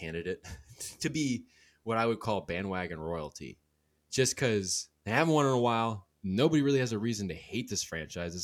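Video or display buzz runs throughout: a screen or video cable couples into the audio path, laying a faint 75 Hz buzz with fizzy hash well beneath the speech.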